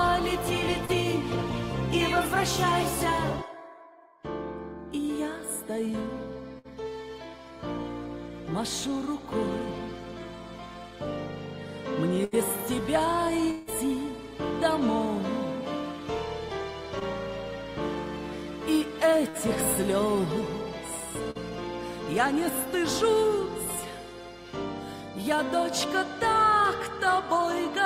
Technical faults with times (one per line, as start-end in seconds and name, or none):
0.85-0.91 short concealed packet loss
6.59-6.67 burst of packet loss
12.25-12.35 burst of packet loss
13.51-13.69 long network dropout
16.99-17.03 short concealed packet loss
19.29-19.37 burst of packet loss
21.31-21.37 short concealed packet loss